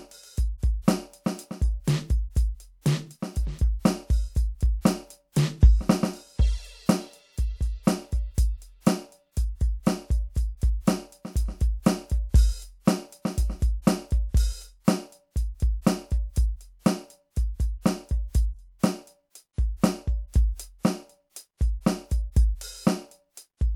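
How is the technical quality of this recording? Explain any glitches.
No technical faults can be heard in the recording, and there are no glitches to explain. The music runs without interruption or damage.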